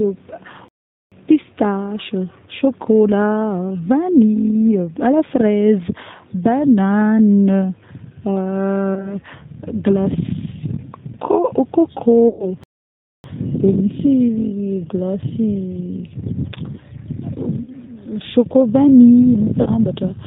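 The whole clip carries G.729 codec damage that is plainly audible. At 8 kbit/s the speech is rebuilt from a vocal tract filter, a pitch predictor and a few pulses per frame. Nothing above 4 kHz survives, so it sounds thin, rough and slightly synthetic.

From 0.68 to 1.12 s the sound cuts out for about 433 ms, then resumes. This is a playback stall. The player likely ran out of data. A second stall, about 606 ms long, runs from 12.64 to 13.24 s.

VoIP packet loss concealed by the speech codec appears at 8.95–9.15 s, 12.28–12.47 s, 17.64–17.70 s and 19.60–19.68 s. The decoder stretches its last pitch and filter into a fading buzzy tone or coloured noise. Speech stays weak briefly afterwards. The gaps point to losses of about 20, 110, 30 and 50 ms.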